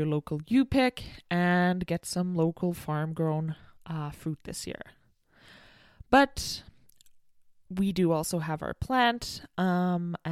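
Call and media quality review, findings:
No call or media quality findings: nothing faulty is heard in the speech.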